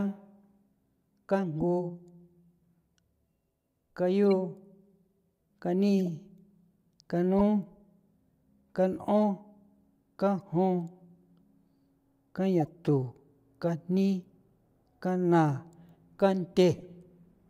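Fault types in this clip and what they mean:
Corrupt frame decoded: damaged compressed frames were played back as if valid, so wrong gains and misread codes place energy at frequencies the speech never had, lasting only as long as a few frames. Eight brief chirps and blips are scattered through the clip, each under a tenth of a second, peaking between about -55 and -20 dBFS. On a spectrogram they are short vertical smears unrelated to the harmonics. The waveform shows abrupt bursts.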